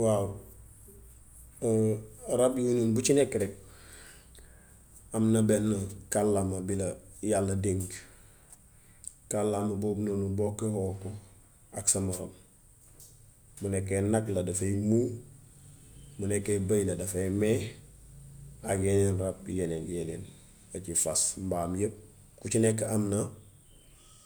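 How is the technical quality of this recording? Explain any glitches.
The technical quality of this recording is good, and there are no glitches to explain.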